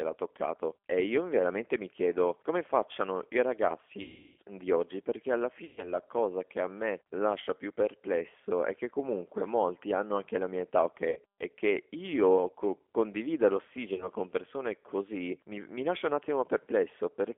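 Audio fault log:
throughout, G.729 codec: The call was carried over an 8 kbit/s G.729A link, which fits a 300 Hz to 3.4 kHz telephone band. The codec does not send the waveform. It sends a vocal tract filter, a pitch predictor and a few pulses per frame, and the decoder rebuilds the speech from those. Nothing above the band survives, so the speech is narrow and boxy. The codec damage is plainly audible as a rough, synthetic texture.
4.02–4.37 s, 5.65–5.93 s, 11.10–11.19 s and 13.94–14.09 s, VoIP packet loss concealed by the speech codec: Four bursts of packets went missing, covering about 360, 120, 60 and 40 ms of speech. The first falls after "chiedo come facciano i" and before "di oggi perché alla". The second falls after "di oggi perché alla" and before "cosa cosa che a". The last comes just before "con persone così". In each gap the decoder stretches its last pitch and filter into a fading buzzy tone or coloured noise, because it has nothing new to decode. 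Each frame builds on the one before, so the speech stays weak or distorted briefly after packets return.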